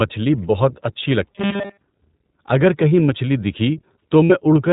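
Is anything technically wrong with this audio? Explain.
Yes. The speech has been through the iLBC codec from start to finish. The audio is cut into frames that are each coded on their own at a low rate, and the sound points to 20 ms frames at about 15 kbps. Nothing above 4 kHz survives, so the speech is narrowband and plainly rough and synthetic throughout.

From 1.31 to 1.83 s there is robotic sound from repeated short buffers. The likely cause is playback being starved of new audio and filling the time by replaying the last short stretch, for most of that half second. The repetition imposes a rigid 200 Hz metallic buzz, which fits a 5 ms buffer. The speech loosely follows its shape underneath.

From 4.25 to 4.32 s there are lost iLBC frames, a gap of 60 ms that fits three missing 20 ms frames. The decoder covers the loss by repeating the last pitch cycle mixed with noise. That is heard as a brief held, buzzy vowel before normal decoding resumes almost immediately.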